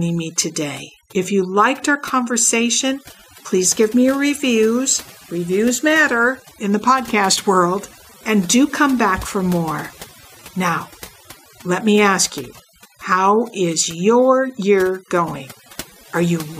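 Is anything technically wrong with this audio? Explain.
Yes. Throughout, the speech sits over a near-silent, twinkling background: overdone noise removal, where aggressive reduction switches off individual frequency bands near the noise floor, taking quieter speech detail too.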